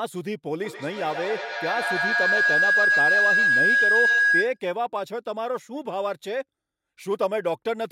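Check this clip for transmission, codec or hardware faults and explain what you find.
A feedback howl runs from 0.64 s to 4.63 s. It starts as a ringing tone near 1.5 kHz and swells until it sits about 6 dB above the speech, with repeats roughly every 150 ms. The cause is a microphone picking up a loudspeaker on the same call in the same room. Each trip around that loop comes back louder, so the repeats grow and narrow onto the frequency the loop favours until the loop is broken.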